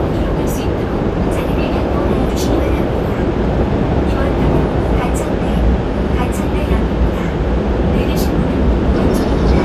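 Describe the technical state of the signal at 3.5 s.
At 3.5 s, as throughout, likely MP2 compression at a rate fitting 80 kbps drops starved sub-bands, leaving nothing above 15 kHz and a dull, plainly gurgling, granular texture.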